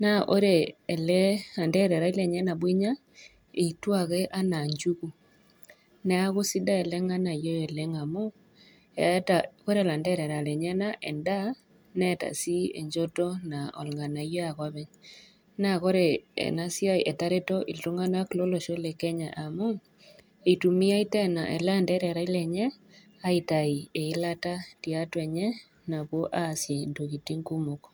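No technical faults can be heard anywhere in the recording.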